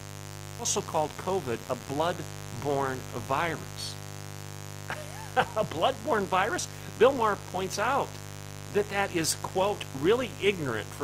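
A mains buzz sits under the speech from start to finish, a steady, raspy tone built on 50 Hz, only about 10 dB below the speech. Sharp switching spikes, such as those from a dimmer, rectifier or poorly shielded cable, enter the signal twice per mains cycle and spread harmonics well into the kilohertz range. That rasp is what separates it from a smooth hum, which would carry little beyond the fundamental and its first few harmonics.

At 0.59 to 0.61 s there is a skip ahead: playback jumps forward with no gap and no filler, and roughly 0.7 s of speech is simply gone. That stretch was dropped in transit or discarded by an overflowing jitter buffer while later audio was already queued, so the two sides are butted almost directly together. Unlike a dropout, there is no silence or concealment at the join, only a sudden jump in what is being said.

From 0.77 to 2.18 s a jitter buffer speed-up follows. 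The buffer was still holding more audio than its target, so the receiver trimmed short pieces of one or a few pitch periods many times in a row, removing roughly 150 ms in total. The speech runs at 110% speed but keeps its normal pitch, so it sounds hurried rather than higher, which is what distinguishes it from a simple playback-rate error.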